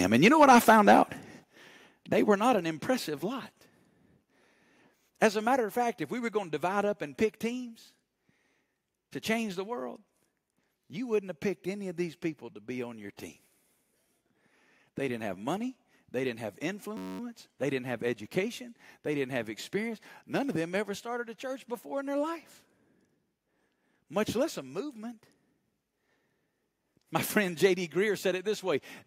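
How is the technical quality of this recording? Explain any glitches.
The recording has two clear glitches in this speech.

At 1.44 s, the level drops abruptly by about 8 dB, both speech and background together. The likely cause is a microphone volume stepped down by the call software, which cut the input gain in one step.

From 16.97 to 17.20 s, just after "didn't have", a system hang loop occurs. The machine stalled while the sound hardware kept replaying a 10.67 ms slice, which fits a 512-sample buffer, 21 times. The result is a steady buzz at 93.8 Hz, with almost no audio lost.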